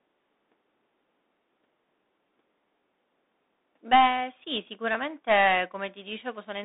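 A speech clip that's been through a Bluetooth CVSD headset codec the whole way through: the band runs from about 250 Hz to 3.7 kHz with nothing above 3.8 kHz. The codec damage is plainly audible, which fits a 64 kbit/s one-bit stream that only steps up or down and can't track fast changes.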